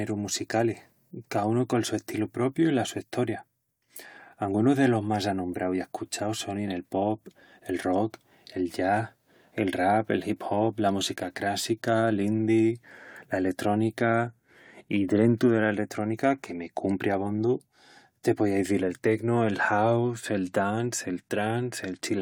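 Nothing in the speech stood out as a technical fault on listening.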